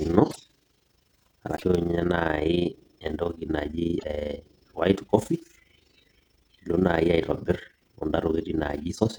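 Speech runs the full length of the clip under a fast, rough flutter. It comes from overlap-add ripple: the audio was split into windowed frames and rejoined with an overlap whose windows do not sum to a steady gain, so the level dips about 11 dB once per frame, at around 30 Hz. Unlike dropouts or packet-loss gaps, the dips never fall fully silent and never drift in timing. The result is an even tremolo locked to the frame rate.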